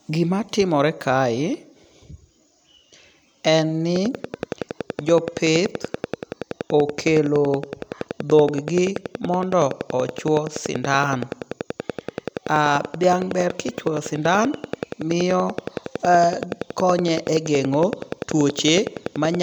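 A train of clicks runs from 3.96 s to 19.36 s of this speech clip: evenly spaced ticks at 10.6 per second, around 150 in all, peaking roughly 10 dB above the speech and audible in pauses too, likely from electrical interference or a faulty connection or power supply.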